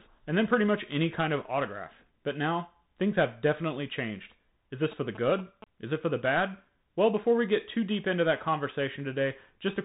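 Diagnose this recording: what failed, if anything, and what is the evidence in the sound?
Codec stage: Bluetooth CVSD headset coding throughout. Nothing passes above 3.8 kHz, sibilants turn scratchy and granular hiss sits underneath, consistent with a one-bit 64 kbit/s delta stream.

Analogue wiring: GSM signalling bursts from 4.83 to 5.64 s, a galloping dit-dit-dit of short buzzes at 217 Hz around 15 dB below the speech, from radio bursts rectified in the circuitry.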